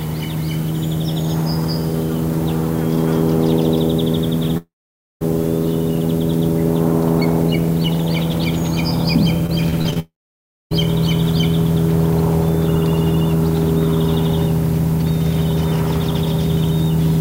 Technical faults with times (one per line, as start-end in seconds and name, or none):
4.57-5.23 long network dropout
9.47-9.97 repeated packet loss (robotic sound)
9.99-10.73 long network dropout